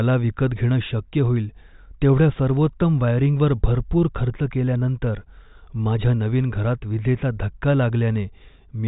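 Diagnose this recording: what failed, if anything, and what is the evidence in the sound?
Nothing has failed here: the speech has the narrow telephone band of a G.726 ADPCM link, which sounds like it is running at 40 kbit/s, with nothing above 3.8 kHz, and that is simply how such a line is meant to sound.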